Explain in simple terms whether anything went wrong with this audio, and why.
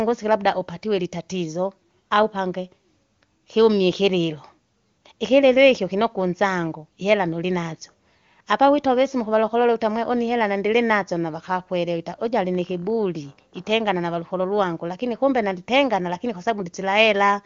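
Nothing went wrong here.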